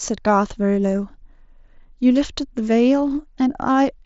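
The clip is speech carried over a Bluetooth mSBC headset link, with nothing above about 7.7 kHz, and nothing is technically wrong with it.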